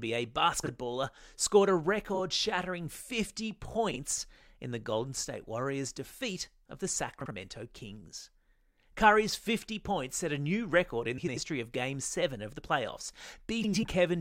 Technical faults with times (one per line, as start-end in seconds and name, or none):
0.63-0.69 frames out of order
2.14-2.19 frames out of order
3.91-3.96 frames out of order
7.21-7.31 frames out of order
11.18-11.37 frames out of order
13.64-13.84 frames out of order